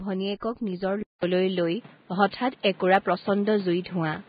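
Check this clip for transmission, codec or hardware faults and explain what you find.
Three faults are audible in this speech clip: low-bitrate Vorbis compression throughout, three pre-echo events, and an input switched to a poorer device at 1.03 s.

Throughout, the treble is grainy and hissy and nothing remains above 4.9 kHz, which likely comes from heavy Vorbis compression at a very low bitrate, around 15 kbps. Coarsely quantised detail turns to noise of similar energy. A spectrogram shows a hard ceiling and speckled, patchy upper harmonics.

Pre-echo occurs at 0.40 to 0.42 s (25 ms), 1.19 to 1.23 s (39 ms) and 2.63 s (14 ms). Quantisation noise spread across a transform block fills the quiet moment before each sharp attack. The result is a brief hiss ahead of each onset. On a spectrogram, a smear of broadband noise leads each attack.

From 1.03 s to the end, the sound changes as if the input switched to a poorer device. 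A 200 ms silence marks the switch. After it, the band stops at 4.6 kHz, the level shifts by around 5 dB, and a new noise floor sits roughly 30 dB below the signal. The waveform shows a gap, then a different envelope.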